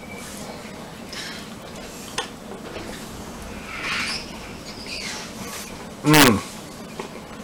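From 6.14 to 6.28 s, the loud passage breaks into violent, harsh cracks, far sharper and more explosive than ordinary clipping. This is integer overflow. The signal was pushed about 6 dB past the largest value the integer format can hold, and instead of being held at that ceiling, each peak wrapped around to the opposite extreme. Every overshooting peak flips across the full range, which produces those sudden snapping bursts.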